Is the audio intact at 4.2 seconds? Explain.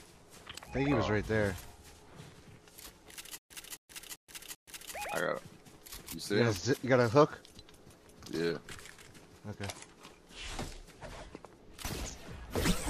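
No. At 4.2 s the audio is caught in a stutter with silent gaps running from 3.38 to 4.94 s. This likely comes from playback stalling, with each retry replaying the last fragment and then running dry. A burst of about 264 ms repeats four times, each followed by roughly 126 ms of dead digital silence, so it returns every 390 ms. Whatever should have played during this span is missing.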